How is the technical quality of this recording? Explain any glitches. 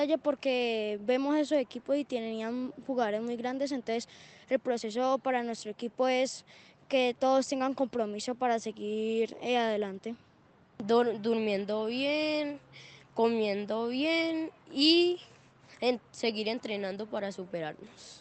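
No glitches to explain here; it's all steady, with just the top-end cutoff around 8 kHz you'd expect from a call codec like Opus.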